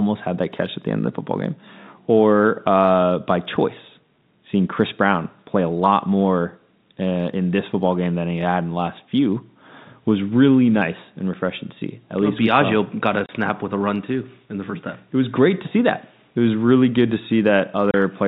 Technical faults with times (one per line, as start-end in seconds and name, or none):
13.26-13.29 packet loss filled with silence
17.91-17.94 packet loss filled with silence